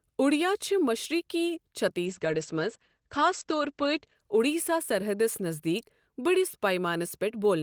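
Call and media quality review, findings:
Call bitrate drop, 2.1 to 4.27 s. Speech turns rough and muffled. Top end cut to 8 kHz, down from 20 kHz. Probable component: Opus encoder following a fallen bandwidth estimate. Coarser coding and narrower band, which fits a bitrate falling from about 32 to 11 kbps. Held at the low level for about 2.1 s, then recovers.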